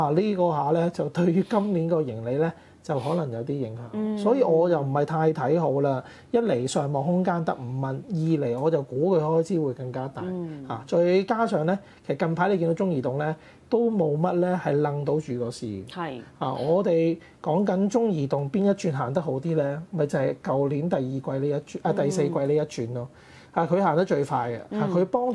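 No technical faults can be heard anywhere here.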